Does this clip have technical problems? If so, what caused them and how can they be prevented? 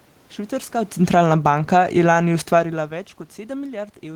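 Yes, there's automatic gain falling in this speech clip. From 0.98 s to 2.87 s the automatic gain control decides the input is too loud or its background noise too strong and eases its gain down, about 11 dB in all, so the speech and the room noise sink together over that stretch. That shared drop in the background is the giveaway; the level shifts around half a second and again near two and a half seconds are just the talker moving. To prevent it, set the input level sensibly and switch off the AGC, or give it a slower, gentler setting.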